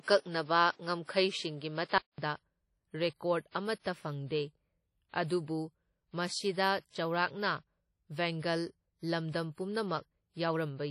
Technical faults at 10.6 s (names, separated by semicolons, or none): WMA compression